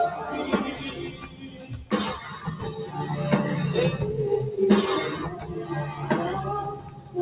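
Throughout, a noise suppressor applied to music or sounds keeps mistaking sustained material for noise. The level swings by around 10 dB and the sound pumps, flutters or thins out. On the waveform this shows as an uneven, breathing envelope. The spectrogram is empty above 4 kHz, which fits a G.711 A-law call path at 64 kbps.

Sound cut by the noise suppressor is heard at 1.08–1.86 s (about 11 dB down), 5.33–5.5 s (about 6 dB) and 6.74–7.16 s (about 10 dB). Held parts sink and tails end early, leaving darkened patches on the spectrogram and a collapsed waveform envelope.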